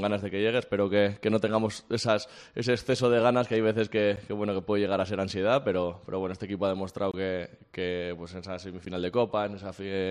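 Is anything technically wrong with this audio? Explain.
Yes. There are three blocks of digital silence, at 4.16 s, from 7.12 to 7.14 s, and at 8.85 s. The two short ones last about 10.7 ms, which fits a 512-sample output buffer arriving late, and the middle one about 21.3 ms, or two such buffers. The signal drops to silence and returns with no fade. The short gaps sound like ticks and the longer one like a brief hole. The instant cut to silence distinguishes this from a fading or noisy dropout.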